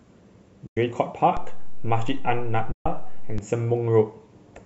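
From 0.67 to 0.77 s the decoder lost AAC frames and zeroed them (AAC frame loss with muting), leaving a soft-edged 100 ms hole that fades out and back in. The length fits about ten short frames of the low-delay AAC codec that likely carries this speech.

At 1.37 s a DC step shifts the waveform's zero line, heard as a low thump. The shift lasts until 3.38 s, while the speech continues unchanged.

From 2.72 to 2.86 s another run of frames was lost and muted, giving a longer 140 ms soft dropout.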